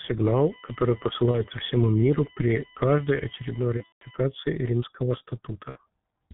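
Speech that sounds muffled and hoarse for its entire length, with nothing above 4 kHz and consonants smeared into one another. This is heavy G.723.1 codec damage at 6.3 kbit/s. The codec works in 30 ms frames and updates its model of the voice slowly, so crisp detail and fast transitions are lost. Three brief disturbances break up the speech: at 1.31 to 1.43 s, at 3.77 to 4.04 s, and at 5.69 to 5.79 s. At each, the voice turns into a buzzy, stretched tone or coloured noise that fades away, and it stays weak and distorted for a moment afterwards. This is VoIP packet loss concealed by the speech codec. The decoder filled each gap by extending its last pitch and filter while lowering the gain. The first gap fits one missing 30 ms frame and the last fits about 60 ms. The middle event is the longest, about 180 ms of missing audio spread across roughly 240 ms, with one unbroken run near 150 ms. 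Because each decoded frame depends on the one before it, the damage carries on briefly after the audio returns.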